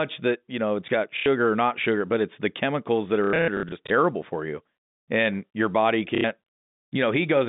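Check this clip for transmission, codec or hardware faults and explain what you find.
There is one fault, packet loss with last packet repeated, occurring three times in speech carried over a G.711 telephone path limited to roughly 150 Hz to 3.7 kHz. Gaps occur at 1.17 to 1.26 s, scattered across 3.24 to 3.9 s (about 300 ms lost in total, with runs up to 90 ms), and at 6.15 to 6.24 s. When packets go missing, the receiver replays the last good packet. These repeats are not aligned to the pitch period, and a run buzzes at roughly 33 Hz, which fits 30 ms packets. The result is a brief robotic stutter.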